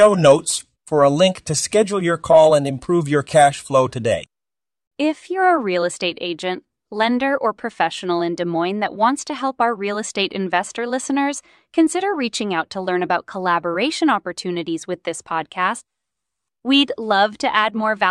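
The speech recording has no audible technical faults anywhere in its duration.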